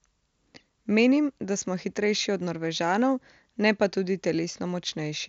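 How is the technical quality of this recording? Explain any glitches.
No glitches or faults turn up anywhere in the recording. The speech comes over a Bluetooth mSBC headset link working as designed, so nothing reaches above about 8 kHz and the codec adds only a light grain.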